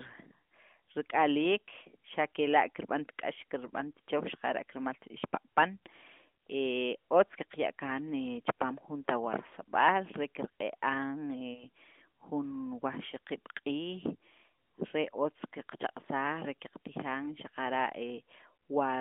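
At 11.54 to 11.64 s, a lost AMR speech frame: the decoder fills the missing 20 ms with the previous frame at lower gain, causing a brief dip or warble.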